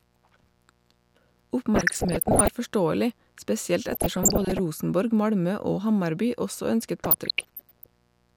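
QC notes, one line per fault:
Throughout, mains buzz: switching spikes from a dimmer, rectifier or unshielded path leak in twice per 60 Hz mains cycle, giving a steady raspy buzz about 40 dB below the speech.
1.75–2.48 s, 3.89–4.59 s, 7.04–7.94 s, DAB burbling: bit errors of around 0.7 to 1 percent slip past error correction into the MP2 data, so short noise blips land in single sub-bands over the speech. The first ends just before "forståelig spesielt" and the second begins just after it.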